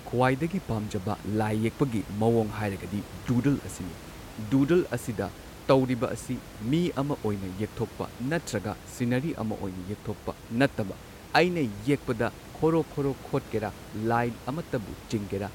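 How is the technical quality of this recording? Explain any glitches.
No glitches are audible in the speech, and the only background is the room's own noise sitting about 17 dB beneath it, which belongs to the recording space rather than the signal chain.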